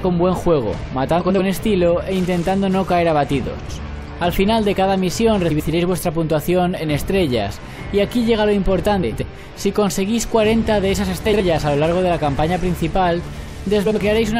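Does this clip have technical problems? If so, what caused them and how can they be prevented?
Yes. Six instances of frames out of order occur, at 1.20–1.40 s, 3.60–3.79 s, 5.50–5.70 s, 9.03–9.23 s, 11.26–11.41 s and 13.86–13.96 s. In each, two adjacent blocks of audio were decoded in swapped order, so the stretch plays with its halves exchanged. It sounds like a brief garbled flutter. The blocks are about 93 ms long in the first four events, 70 ms at 11.26 s and 46 ms at 13.86 s, which fits runs of four, three and two codec frames. The total duration is unchanged because no audio is lost. To prevent this, carry sequence numbers with each frame and reorder packets in a jitter buffer before decoding.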